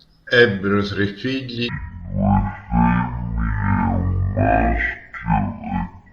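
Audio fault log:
1.69 to 6.12 s: stereo read as mono. The speech suddenly slows to half speed and drops a full octave. Left and right samples are read in turn as one channel, so each stretch lasts twice as long and every frequency halves.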